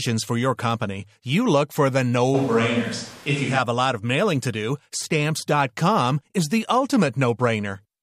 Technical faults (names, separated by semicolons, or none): switch to a distant microphone